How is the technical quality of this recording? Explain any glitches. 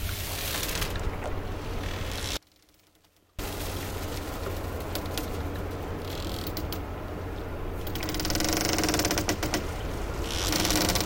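The recording has two clear technical faults.

From 2.37 to 3.39 s there is an audio dropout to a faint residue. For about one second the sound collapses abruptly to a faint trace roughly 35 dB down, likely because the signal was lost while the path stayed live. The waveform shows a sudden near-flat stretch, and the spectrogram shows a dim band with hard vertical edges.

From 9.43 s to the end there is a doubled audio track. A full-band copy at about equal level trails the original by roughly 300 ms, heard as a dry, colourless repeat. It likely comes from a second, slower capture path. The spectrogram shows every event twice, offset in time and starting abruptly.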